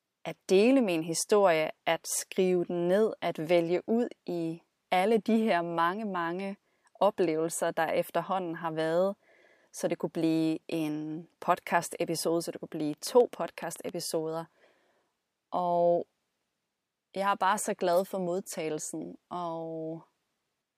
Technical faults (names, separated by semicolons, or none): train of clicks